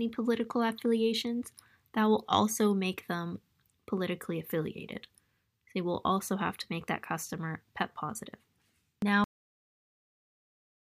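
At 9.24 s the sound stops dead, mid-event, with no fade or natural decay, and is followed by flat digital silence for the remaining 1.6 s or so. This is a cut-off end: the final stretch of audio was never written out or played back, so the last buffers are simply missing. The abrupt drop to nothing at that moment, rather than a tail dying away, is the mark of that truncation.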